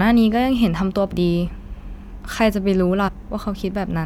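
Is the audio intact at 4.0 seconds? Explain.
Yes, the speech at 4.0 seconds plays through intact, with no audible fault at that moment.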